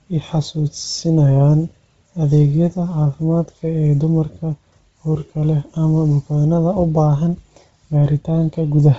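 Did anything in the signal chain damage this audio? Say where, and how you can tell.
Yes. Throughout the speech, the top end is gone above 7.7 kHz, and what remains in the upper band has a grainy, breathy hiss instead of real detail. That points to the codec stage, most likely Bluetooth LC3 compression: at a low rate, consistent with about 24 kbps in 7.5 ms frames, the encoder zeroes most upper spectral lines and fills them with shaped noise. Here the damage is heavy, roughening the voice across the whole clip.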